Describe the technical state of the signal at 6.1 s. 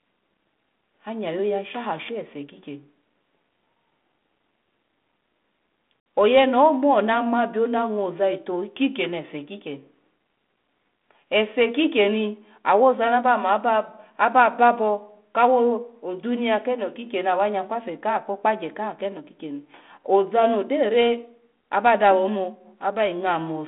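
At 6.1 s you're just past packet loss on an ADPCM call: a 60 ms silent hole from 6.0 to 6.06 s, about three packets. The decoder's predictor and step size lose track, so sound returns slightly distorted.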